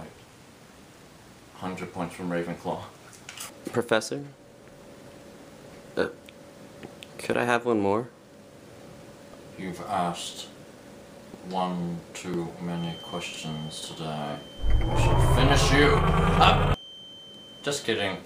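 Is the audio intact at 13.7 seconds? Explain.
No, at 13.7 seconds there's a feedback whistle, a thin, steady tone at 3.1 kHz running from 12.66 s to the end, sitting well below the main sound and wavering a bit. It's likely a speaker-to-mic loop hovering right at the edge of feedback.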